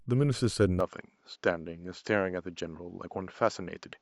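From 0.80 s the speech turns duller, with nothing above 7.6 kHz and a faint new hiss, likely an input switched to a poorer device.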